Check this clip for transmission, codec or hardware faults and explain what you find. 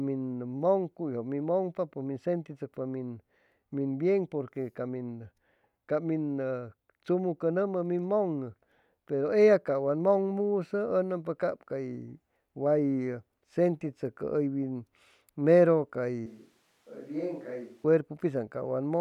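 One fault stands out: a switch to a distant microphone from 16.26 to 17.84 s, likely because the close mic dropped out. The speech turns hollow and roomy, about 10 dB quieter, with a raised noise floor. The waveform shows an abrupt level step, and the spectrogram thins in the bass, with haze filling the gaps between sounds.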